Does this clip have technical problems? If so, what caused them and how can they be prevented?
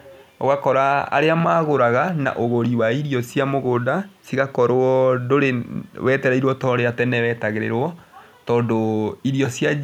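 No, the recording shows no technical problems, and its signal path holds steady throughout with nothing that calls for prevention.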